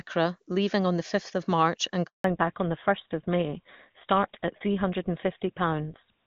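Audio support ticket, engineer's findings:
Handover gap, 2.06 to 2.24 s: speech cuts out for 180 ms. Network handover, no speech frames delivered during the switch, so audio in that span is lost.

Fallback to narrowband from 2.24 s to end: content above 4 kHz gone, sound duller and rougher. HD Voice, which sounded clean before the gap, dropped to an older narrowband codec, probably GSM full rate.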